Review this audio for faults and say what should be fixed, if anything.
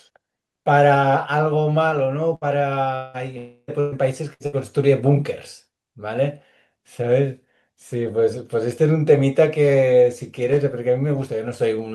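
Bursts of packet loss occur at 2.35–2.44, 3.80–3.94, 4.33–4.57 and 4.46–4.55 s. Each gap is filled by a fading continuation of the last sound. The missing stretch is skipped.

At 2.95–3.17 and 3.38–3.71 s, a buzz or hiss fades for about 0.2 and 0.3 s, then the speech resumes. The likely cause is a long network dropout.

A larger jitter buffer, forward error correction and a more stable network link would prevent these gaps.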